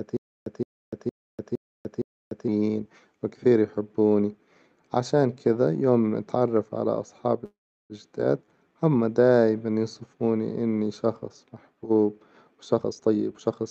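From 0.00 to 2.48 s, the clip opens with a stutter with silent gaps, already under way. A 166 ms burst of speech plays, then 296 ms of dead digital silence follows. The cycle repeats every 462 ms, five times in all. The likely cause is a stalled player or stream that replayed its last fragment at each retry. Whatever speech belonged in those gaps is gone.

At 7.45 s a call audio freeze begins and lasts until 7.93 s. The last sound is stretched into a buzzy fill that decays, and about 370 ms of it is near silence. The likely cause is delayed packets draining the jitter buffer. When audio resumes, it picks up exactly where it stopped. Nothing is lost, but 445 ms of extra delay has been inserted.

From 12.80 to 13.67 s there is a jitter buffer speed-up. The speech runs at about 137% of normal pace, yet the pitch holds steady. The receiver is trimming tiny slices, each a pitch period or a few long, over and over. 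Around a third of a second is removed this way to cut the built-up delay. The effect sounds rushed. It sits on top of the Opus call path, whose band stops near 8 kHz.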